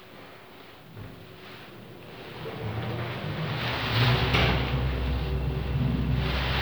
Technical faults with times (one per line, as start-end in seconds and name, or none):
none